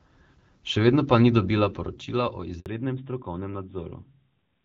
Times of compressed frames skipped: none

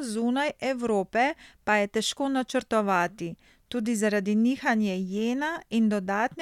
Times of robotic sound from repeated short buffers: none

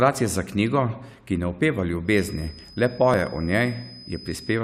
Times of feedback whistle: 2.03-4.63

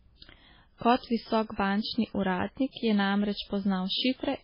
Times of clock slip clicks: none

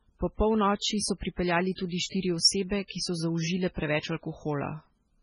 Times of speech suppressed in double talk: none

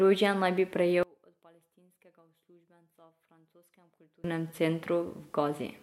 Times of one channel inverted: 1.03-4.24

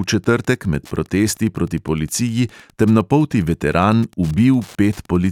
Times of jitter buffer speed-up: none

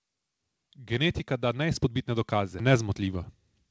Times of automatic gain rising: 0.75-3.32

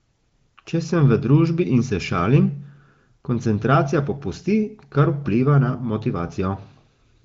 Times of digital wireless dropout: none

